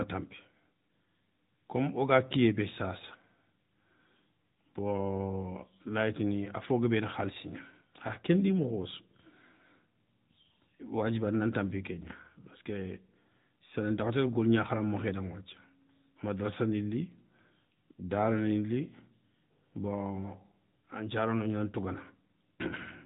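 From start to finish the speech carries the sound of the AMR narrowband mobile codec. Nothing above about 3.8 kHz survives, so the audio is dull and telephone-like, without sibilant detail. The codec rebuilds the voice from a vocal-tract model excited by a few pulses per short subframe, and at this setting the damage is plainly audible as a buzzy, synthetic edge, which fits a mid-rate AMR-NB mode of around 10 kbps.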